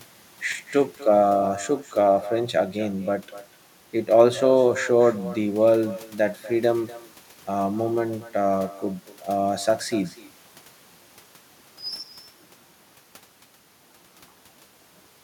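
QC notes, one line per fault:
throughout, echo with no canceller: every phrase is shadowed about a fifth of a second later by a thinner copy about 17 dB down, the far end's loudspeaker feeding its microphone uncancelled. It is a distinct delayed repeat, not the smooth tail of room reverberation.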